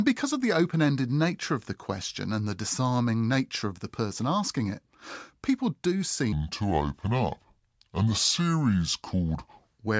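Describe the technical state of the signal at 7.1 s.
At 7.1 s the speech is affected by a wrong sample rate, running from 6.32 to 9.71 s. The sound plays at 0.73 times its original speed, which fits 22 kHz audio played at 16 kHz. Pitch drops about 5.5 semitones. The voice sounds low and slow.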